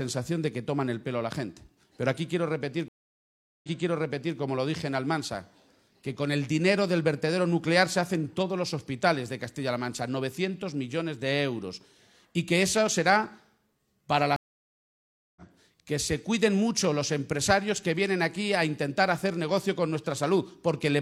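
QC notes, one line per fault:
2.88–4.38 s, stream reconnect: the audio drops out for about 0.75 s, then picks up again roughly 0.74 s earlier than where it cut, so you hear a short stretch twice. That's the server resending a burst after the player reconnected, with a fresh decoder easing in.
14.36–15.42 s, stream reconnect: about a second of dead air, then it comes back around a second further on, so a chunk is simply skipped. That's the live stream moving on while the connection was down.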